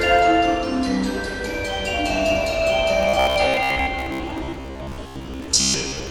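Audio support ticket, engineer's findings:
Robotic sound from repeated short buffers, 3.03 to 6.10 s: everyday sound collapses into a rigid metallic buzz near 66.7 Hz. Likely an audio path starved of input, looping a 15 ms block and skipping about half the real audio. A fixed pitch, not gaps, separates it from plain dropouts.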